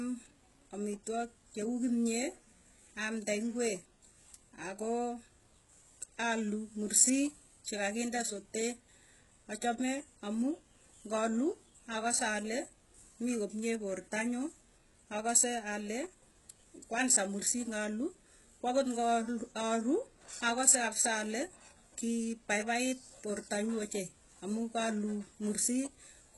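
HE-AAC compression runs through the whole speech clip. The treble sounds rebuilt rather than recorded, which likely comes from HE-AAC's band replication, where copied and reshaped lower bands stand in for the real upper spectrum. The damage is heavy, and the hiss and crispness of s sounds turn gritty and metallic. Nothing remains above 11.5 kHz, and the coarseness fits a bitrate around 12 kbps.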